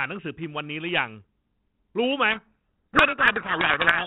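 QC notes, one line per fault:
2.32 s to end, codec payload misread: the decoder reads the 32 kbit/s G.726 code words in the wrong bit order, burying the speech in harsh distortion.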